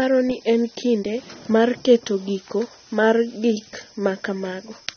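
Heavy AAC compression is the likely cause, at a bitrate near 24 kbps, throughout: nothing survives above 6.3 kHz, leaving the speech dull, smeared and warbly.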